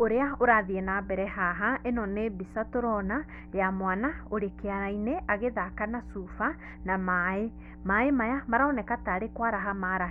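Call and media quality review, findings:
Mains hum throughout, steady 60 Hz tone under the speech, well up but below it, roughly 15 dB down. Probable ground loop or nearby transformer coupling line frequency into the signal path. Spectrogram: unbroken horizontal line at 60 Hz plus some low harmonics, present in pauses too.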